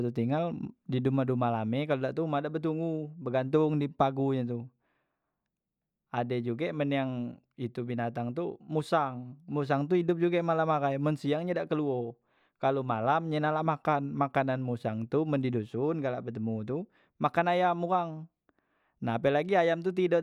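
No technical faults can be heard anywhere in the speech recording.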